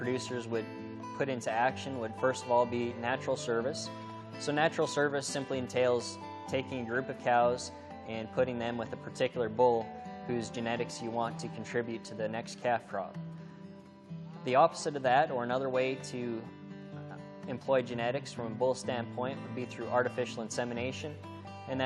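No technical faults can be heard anywhere in the clip.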